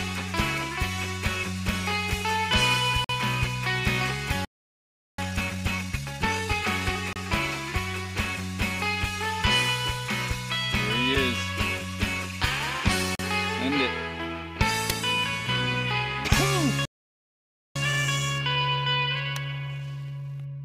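Here's a bit of audio with three kinds of playback trouble. First, there are gaps between stream segments. Short hard-edged holes of silence cut in at 3.04 s (about 49 ms), 7.13 s (about 29 ms), 11.15 s (a tiny 4 ms one) and 13.15 s (about 39 ms). They land on a grid that fits 2-second segments, so the timestamps at those joins don't quite meet and the player pads the hole with silence, though nothing is actually missing from the audio itself. Second, there are two playback stalls, from 4.45 to 5.18 s (about 0.73 s) and from 16.85 to 17.76 s (about 0.9 s). The sound just stops mid-flow and then picks up again. The likely cause is the player running dry of data or its thread getting blocked, and there's no telling which from the sound alone. Third, each stall is followed by time-compressed catch-up, where the player trims its backlog by snipping out small pieces and cross-fading over the cuts. 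After the first stall, 5.18 to 6.64 s plays at 1.5x. After the second, everything from 17.76 s to the end runs at 1.15x. In both stretches the audio sounds hurried, but the pitch stays where it should be.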